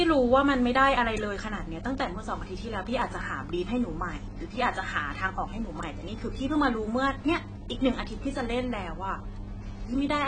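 Throughout the recording, a low-bitrate encoder has likely squeezed the speech through AAC compression, starving the quantiser of bits so it discards detail the hearing model judges expendable. The damage is plainly audible: nothing survives above 9.3 kHz, leaving the sound dull and closed-in, and the thinned spectrum gives sibilants and sustained vowels a smeared, warbling, fizzy edge. That degree of loss fits a stream of around 24 kbps.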